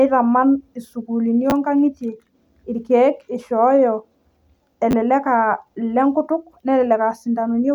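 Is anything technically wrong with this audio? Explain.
Yes. Chunks out of order occur at 1.50 to 1.52 s and 4.91 to 4.93 s. In each, one 10 ms chunk plays one slot late, swapping places with its neighbour. Unlike a dropout, nothing is missing: there is a brief jumbled stutter with three hard joins.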